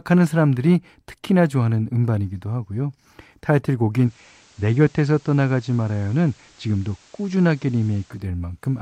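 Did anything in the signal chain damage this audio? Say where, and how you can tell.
Yes: digital radio blending to analogue at reception, 3.93 to 8.27 s. A 250 ms cross-fade to FM brings in hiss about 30 dB down. The level drops about 1 dB. Unlike a codec bitrate drop, the hiss points to the analogue path.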